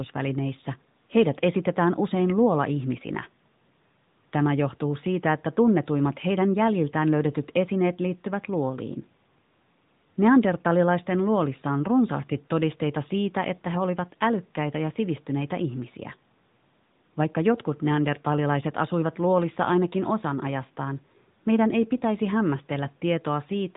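Throughout, the speech sounds muffled and plainly buzzy with nothing above 3.8 kHz, the mark of the AMR narrowband mobile codec at a bitrate near 10 kbps.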